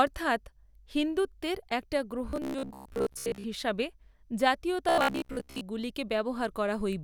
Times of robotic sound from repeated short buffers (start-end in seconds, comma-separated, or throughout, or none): 2.30-3.45, 4.89-5.62